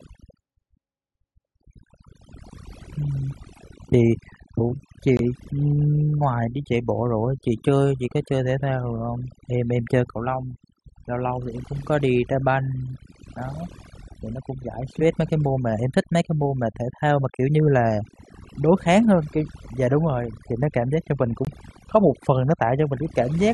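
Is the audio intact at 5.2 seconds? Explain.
No. From 5.17 to 5.21 s the speech drops into a sudden, hard-edged gap of silence about 34 ms long, then resumes on time with nothing lost from the timeline. This is a corrupt frame muted. Flipped bits left a compressed frame undecodable, the decoder rejected it, and the player substituted silence for it. A gap of that length fits a single lost frame.

Around that moment the overdone noise removal that runs through the whole clip is also audible. The background sits near silence with small twinkling specks. A noise reduction stage set too aggressively is pushing individual frequency bands down or out whenever they come close to its noise estimate, so the quieter parts of the voice are removed along with the noise.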